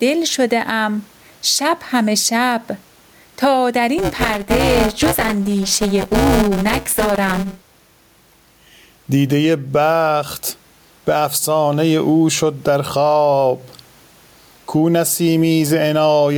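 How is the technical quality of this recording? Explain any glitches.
The recording has two clear problems: a constant squashed quality and a stretch of mechanical buzz partway through.

Gain pumping runs through the whole clip. The room noise sits well below the speech, about 45 dB down. The level moves by around 10 dB, and loud and quiet passages end up pressed close together. The likely cause is input gain set far too high, with a fast limiter or compressor clamping down on each loud peak and letting go in the gaps.

Buffer tearing sits between 3.98 and 7.79 s. While the speech continues there, it takes on a robotic rattle at 200 Hz, which points to a 5 ms buffer period. The writing side and the reading side of the audio buffer have drifted into each other, so the reader crosses the write position inside every period. About a third of each chunk is stale audio from a lap earlier, around 10 ms old, and sharp joins on both sides of that stale piece produce the buzz.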